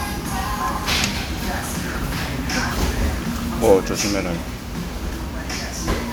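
A recording of sounds, swirly, smeared and hollow throughout with blurred attacks: generation loss, likely from about five successive MP3 encodes at a rate that fits 128 kbit/s.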